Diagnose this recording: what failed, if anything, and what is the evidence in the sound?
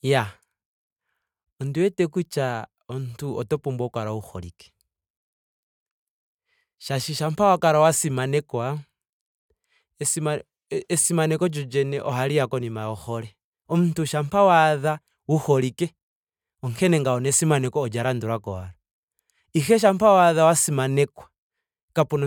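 Listening to the speech recording, nothing stood out as a failure at any stage of the chain.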